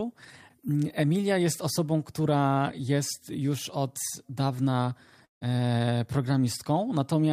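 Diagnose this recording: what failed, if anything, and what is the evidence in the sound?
The fault most likely sits in the network stage, a long network dropout from 5.25 to 5.43 s. The speech gives way to a fading buzzy continuation, then about 130 ms of near-silence, and resumes with roughly 160 ms missing. Unlike a brief packet loss, the concealment exhausts itself into silence rather than bridging smoothly.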